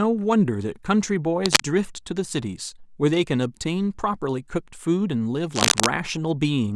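At 1.44 to 1.60 s and again at 5.55 to 5.86 s, a burst of cable scratch noise rasps over the speech, roughly 5 dB above it, most likely a worn connector or lead shifting. Each appears as ragged, broadband vertical smearing on a spectrogram and jagged spikes in the waveform.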